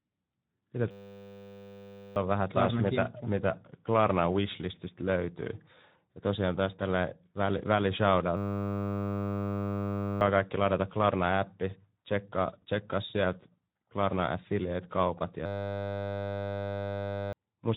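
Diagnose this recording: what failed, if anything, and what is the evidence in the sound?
Codec stage: the whole recording carries Speex codec damage. The speech is hoarse and noisy, with nothing above 3.8 kHz. That fits a bitrate near 11 kbps starving the CELP excitation. It is a constant coarse texture, not a clean band limit or intermittent packet-loss gaps.

Driver or buffer stage: a system hang loop occurs three times, at 0.91–2.16 s, 8.37–10.21 s and 15.46–17.33 s. Each time the hardware replays one 10 ms buffer exactly, giving a steady 100 Hz buzz rather than a stutter or silence. About 1.5 to 2 s of audio vanishes each time.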